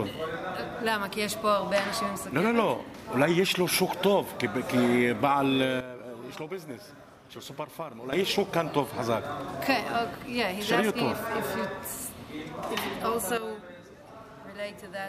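The audio drops abruptly in level twice, with the sound and its background noise falling together rather than fading. The first drop, about 12 dB, runs from 5.81 s to 8.13 s before the level returns. The second, about 9 dB, starts at 13.38 s and lasts to the end. These are sudden gain jumps, likely caused by a digital gain setting being switched instantly between samples instead of ramped.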